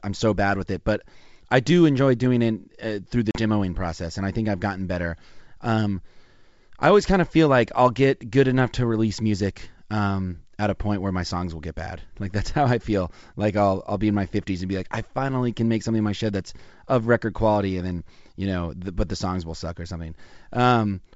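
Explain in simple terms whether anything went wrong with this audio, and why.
Around 3.31 to 3.40 seconds, between "through the" and "process and I think", the sound drops out abruptly, and when it returns the speech is slightly distorted for a moment. This is packet loss on an ADPCM call, here carried by G.722 wideband coding. A few packets, about 40 ms of audio, went missing and were filled with silence. Because this kind of decoder predicts each sample from the previous ones, it briefly loses track of the sender and takes a moment to recover.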